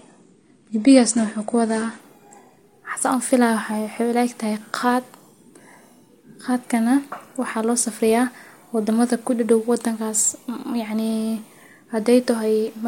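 From 0 to 2.0 s, the speech shows an adaptive stream starting at a low bitrate. Nothing sounds above 9.7 kHz. At 2.0 s, quality jumps without a gap.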